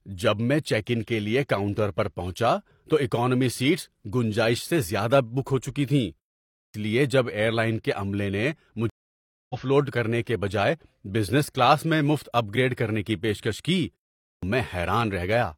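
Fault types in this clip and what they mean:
Clipped start after a pause: the output device sleeps during silence and wakes late, so speech at 6.58 s and 14.28 s begins abruptly, losing about 160 ms and 145 ms.
Stream reconnect: the connection dropped, giving 600 ms of silence at 8.90 s; a fresh decoder then resumes the speech roughly 0.3 s further along.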